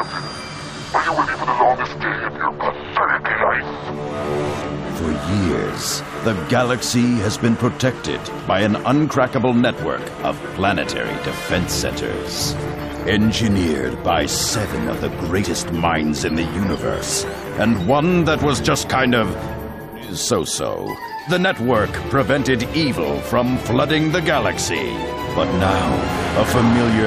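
Compressed frames skipped at 0.83 s and 15.43 s: the audio jumps ahead by roughly one and two frames of about 23 ms.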